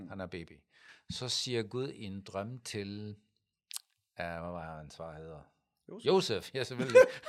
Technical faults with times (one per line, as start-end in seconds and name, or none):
0.48-0.89 one channel drops out